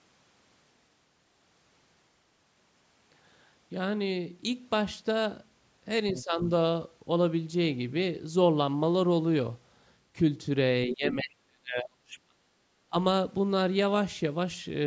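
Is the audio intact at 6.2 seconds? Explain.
No. From 6.13 to 6.45 s the speech dips in level, by roughly 10 dB at its deepest, and the affected stretches total around a fifth of a second. This is likely speech suppressed in double talk: when both ends talked at once, the echo canceller could not tell the near talker from loudspeaker echo and attenuated everything it picked up. The call microphone processing leaves nothing above 8 kHz.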